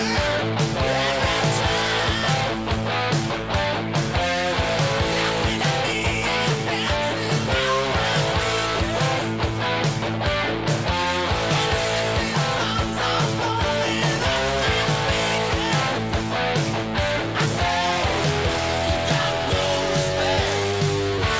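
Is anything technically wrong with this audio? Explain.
No, nothing is wrong; the audio simply carries the band-limiting of a wideband call path, with no content above 8 kHz, which is consistent with a codec such as G.722.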